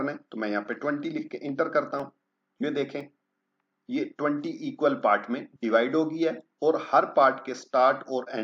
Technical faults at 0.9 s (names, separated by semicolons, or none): none